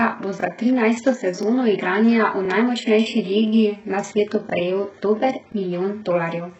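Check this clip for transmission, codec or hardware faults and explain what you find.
Two faults are audible in this speech: heavy codec damage throughout and repeated stutters at regular joins.

HE-AAC compression runs the whole clip. Nothing sounds above 8 kHz, and the treble is rebuilt from copied lower bands. The heavy damage likely points to a very low bitrate, around 8 kbps.

Overlapping chunks cause stutters at 0.41, 1.43, 2.45, 3.48, 4.50 and 5.52 s. Each chunk of about 1 s starts early, so about 23 ms replays as a click.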